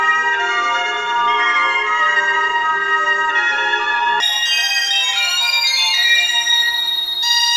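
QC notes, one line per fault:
4.20–7.57 s, wrong sample rate: from 4.20 s to the end, the sound jumps to double speed and rises a full octave (12 semitones) at once, with speed and pitch moving together. Material captured at 16 kHz is being clocked out at 32 kHz with no rate conversion, so every sample plays back in half the time and all frequencies double. The effect is a hurried, chipmunk-like quality, and the section takes half its proper duration.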